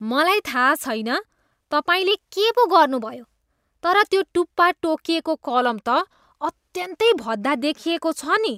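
From 2.11 to 4.03 s the speech runs about 6% fast and rises by roughly a semitone (101 cents), then drops back to normal. From 5.50 to 6.24 s the opposite happens: a 6% slowdown and a fall of about 107 cents, then a snap back. This is likely a drift correction step, where clock-matching software changes the playback rate in one jump to refill or drain its buffer.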